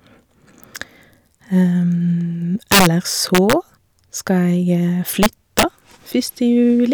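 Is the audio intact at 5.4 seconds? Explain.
No. Integer overflow runs from 5.23 to 5.63 s, covering that moment. The speech is driven about 4 dB past the integer limit, and instead of being held there, each peak wraps around to the opposite sign. That produces violent cracks on the loud parts, far harsher than ordinary clipping.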